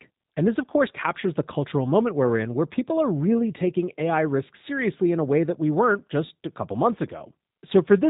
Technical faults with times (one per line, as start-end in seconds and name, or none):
0.00-8.10 G.729 codec